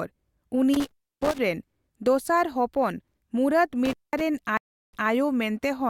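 Intermittent contact at 0.74 to 1.39 s and again at 3.85 to 4.21 s, just after "ᱦᱚᱯᱚᱱ ᱢᱩᱨᱟᱫ": a loose plug or cable briefly opens the signal path, so the speech drops out for about 300 ms and then 200 ms, with crackle at each edge and faint hiss during the gaps.

Stream reconnect at 4.57 to 5.09 s: the connection breaks and the audio goes silent for 357 ms. When a fresh decoder picks the stream back up, playback resumes 160 ms earlier than where it stopped, so a short stretch of speech repeats.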